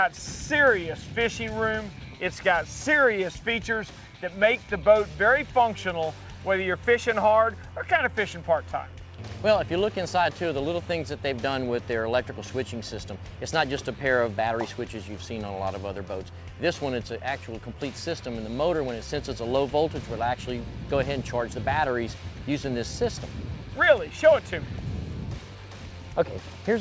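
No technical faults are audible anywhere here.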